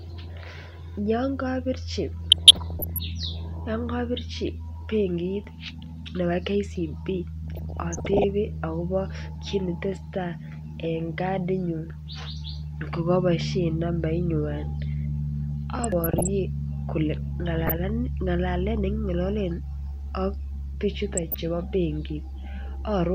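Speech with five bursts of DAB burbling: 2.24–2.98 s, 7.48–8.24 s just before "akobo kit", 15.73–16.28 s, 17.46–17.79 s and 21.13–21.35 s. Short blips of noise ride over the speech. Weak reception lets a few bit errors, well under one percent, slip past error correction.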